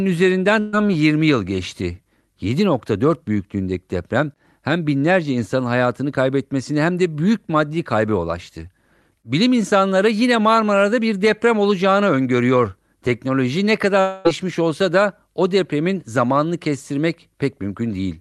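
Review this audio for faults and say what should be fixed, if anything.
At 0.59 to 0.75 s the sound smears into a brief held sound that fades before the speech picks up slightly further on. This is a burst of packet loss: about 140 ms never arrived, and the receiver stretched the last sound across roughly 132 ms to cover the gap. Stronger packet-loss protection, such as in-band forward error correction or redundancy, would help reconstruct short bursts like this.

From 14.01 to 14.27 s the speech trails into a fading held sound lasting about a quarter of a second, and resumes with a chunk skipped. That is likely a long network dropout: around 240 ms of audio was lost, and the receiver filled it by extending and fading the last sound. A more stable connection, or a jitter buffer that tolerates longer delivery gaps, would prevent this.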